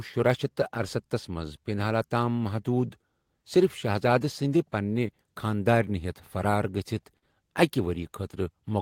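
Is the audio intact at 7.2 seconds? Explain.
No, not quite. Between 7.18 and 7.25 s there's a short stall from a late packet. A packet didn't arrive on time and the jitter buffer ran dry, so the receiver held the last bit of sound for about 40 ms until the data showed up, then carried on from the same spot. Nothing is lost, but that moment drags slightly and you can hear a faint buzz or dip where the sound is stretched.

That stall sits inside a longer run of repeated timing corrections from 0.21 to 8.53 s. The receiver keeps making small edits to stay in step, and here they all pad the audio, playing it at about 98% speed and adding around a fifth of a second over the stretch. The edits are small and unevenly spaced rather than one obvious glitch.

Underneath both is clock drift between sender and receiver, present through the whole clip. The sender's clock runs roughly 3 percent slow compared with the receiver's, so the buffer keeps draining. 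That's why the receiver keeps stretching the sound, and why a late packet at 7.2 s was enough to empty the buffer for a moment.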